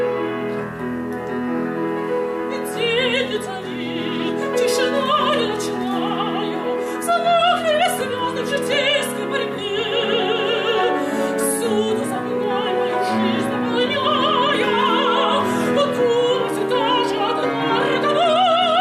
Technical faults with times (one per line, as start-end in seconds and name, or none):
none